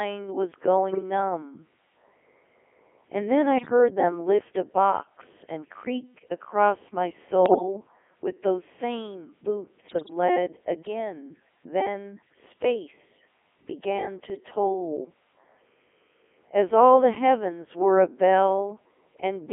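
Throughout, the speech passes through a Codec 2 vocoder, most likely its 3.2 kbit/s mode, confined to 300 Hz to 3.4 kHz. Only pitch, voicing, energy and envelope survive, so the damage is heavy: the voice is rebuilt from sine waves and sounds buzzy and robotic. A spectrogram shows neat synthetic harmonic stacks with no real fine detail.

Bit errors on digital voice radio strike at 0.92 to 1.03 s, at 3.58 to 3.70 s just before "them lift a box", at 7.46 to 7.62 s between "and creak across my" and "with those same", and at 9.88 to 10.10 s before "lead again". Corrupted frame parameters make the voice jump in pitch and level and warble into bleeps. On a spectrogram the harmonics jump abruptly from frame to frame, and the waveform envelope lurches.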